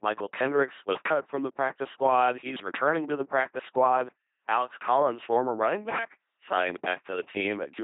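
From start to finish the speech passes through an LPC-10 vocoder. It rebuilds each moment from a ten-pole filter fed by either a pulse train or noise, giving a buzzing, mechanical robot voice with heavy damage. Nothing remains above 3.7 kHz, which fits the 2.4 kbit/s rate.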